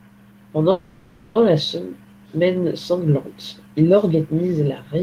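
A call audio freeze interrupts this speech clip from 0.71 to 1.37 s, a 640 ms buzzy continuation where packets were likely delayed, after which speech resumes intact, only later.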